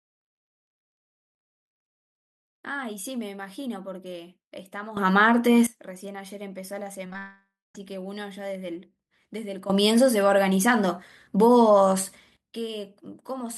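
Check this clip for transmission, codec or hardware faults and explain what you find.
Three kinds of fault are present: sudden gain jumps, a burst of repeated packet loss, and a long network dropout.

Sudden gain jump, 4.97 to 5.67 s and 9.70 to 12.37 s: the level rises by about 15 dB and about 14 dB, likely from a digital gain step applied without a ramp. Speech and background noise jump together. The waveform envelope steps up abruptly, and the spectrogram brightens across all frequencies at once.

Repeated packet loss (robotic sound), 7.05 to 7.15 s: four short gaps, the longest 22 ms, are each patched by continuing the previous sound, so about half of this span is synthetic. It sounds choppy. The spectrogram shows smeared, repeated slices, and the waveform shows small irregular discontinuities.

Long network dropout, 7.18 to 7.75 s: about 570 ms of audio is missing, likely from a network outage. 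The receiver stretches the last sound into a fading buzz or hiss, followed by about 220 ms of silence. The spectrogram shows a smeared tail fading into a blank band, and the waveform decays to flat.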